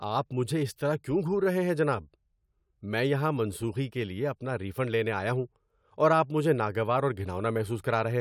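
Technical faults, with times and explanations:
Speech audio checked, and no technical faults found.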